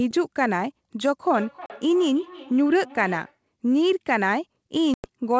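From 1.34 s to 3.39 s there's feedback echo between two devices. Another device in the room is on the same call, playing back what this microphone sent, and the microphone picks it up again. The local echo canceller only knows about its own loudspeaker, so it leaves this alone. You hear the sound come back roughly every third of a second, thinner and a bit ringy, peaking at about 17 dB below the direct sound.

Inside that stretch, at 1.66 s, there's packet loss on an ADPCM call: a hard-edged 40 ms hole, which fits about two packets going missing. A second one hits at 4.94 s, this time a 100 ms gap, around five packets' worth. In both cases the G.722 decoder's predictor and step size drift out of step with the sender's while the audio is missing. So the sound comes back slightly distorted, settling within a few tens of milliseconds.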